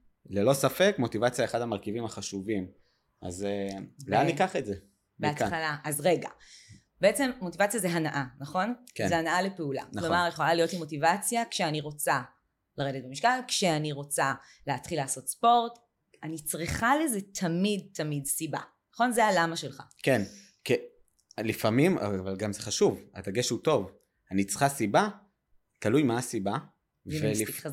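No technical faults can be heard anywhere in this speech recording. Nothing in the sound points to a problem at any moment.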